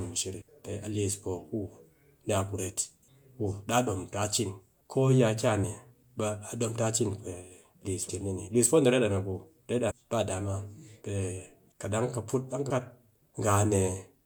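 Short bursts of damaged data in a compressed stream occur at 0.40 s, 5.63 s, 8.08 s, 9.90 to 9.92 s and 12.69 s. At each, corrupted frames knock the decoder out of sync until it finds the next frame header, producing a brief chirp, squawk, click or short hole.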